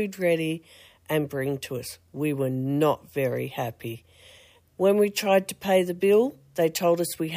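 Nothing here trips the ear at all, so there's no fault to walk through in this one.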